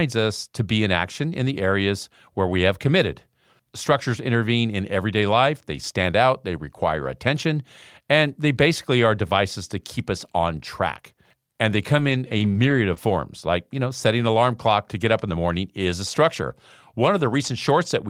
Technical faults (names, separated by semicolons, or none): scattered short gaps